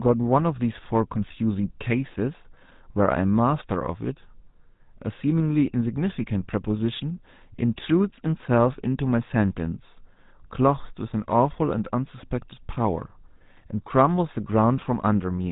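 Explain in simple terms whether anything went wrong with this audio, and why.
Something did go wrong: the speech runs through the GSM full-rate codec from start to finish. That old phone codec rebuilds the voice from a coarse pulse pattern, so it sounds buzzy and gravelly, and everything above about 3.8 kHz is gone, leaving it thin and muffled.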